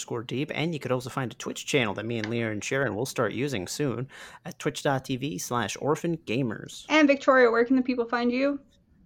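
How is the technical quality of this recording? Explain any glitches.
No glitches or faults are audible anywhere in the recording.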